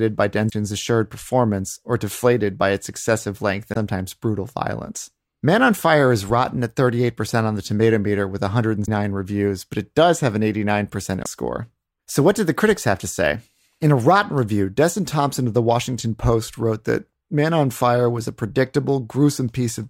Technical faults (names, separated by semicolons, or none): damaged data in a compressed stream